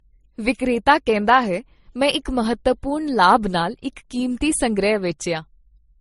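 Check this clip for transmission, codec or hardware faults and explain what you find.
Throughout the speech there is a layered codec sound that points to transcoding between lossy codecs. Nothing reaches above 11.2 kHz, and the lowest cut-off in the chain stayed. It is likely the result of an MP3 pass near 48 kbit/s, then an Opus pass, then MP3 again, each re-encoding the previous artefacts. Unlike a single low-bitrate encode, the artefacts of different codecs sit on top of one another instead of showing one consistent texture.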